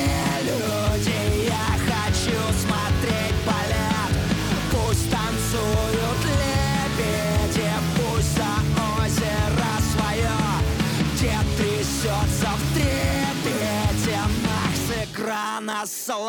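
At about 15.04 s there's a single sharp click, a quick tick that shows up as a thin vertical line straight up the spectrum. It's most likely dropped samples: just a handful went missing, something like a tenth of a millisecond's worth, so the waveform jumps from one value to a later one with no transition. That step is far too short to remove any sound, but the sudden discontinuity is what you hear as the click.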